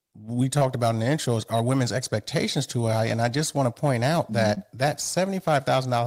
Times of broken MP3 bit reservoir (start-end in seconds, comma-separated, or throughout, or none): none